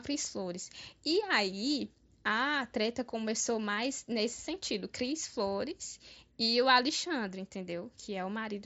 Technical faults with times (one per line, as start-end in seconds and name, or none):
none